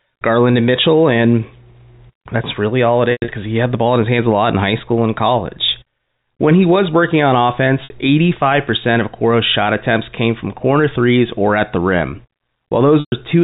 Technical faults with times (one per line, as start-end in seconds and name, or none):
3.12-3.28 packet loss with pitch repetition
7.84-7.90 packet loss with pitch repetition
13.00-13.12 packet loss with pitch repetition